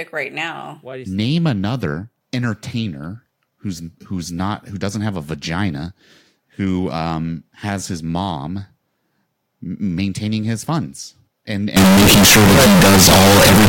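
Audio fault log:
11.77–13.68 s float read as integer: loud, harsh, near-square waveform at an almost fixed high level, noise level with speech; likely 32-bit float samples read as integers.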